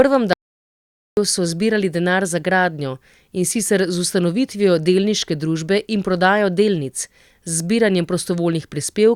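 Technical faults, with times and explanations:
0.33 to 1.17 s: audio dropout to silence. The speech cuts off abruptly and returns mid-flow after about 0.84 s of silence, with no room tone underneath. The input was likely lost briefly while the recorder kept writing silence, so that stretch of speech is unrecoverable.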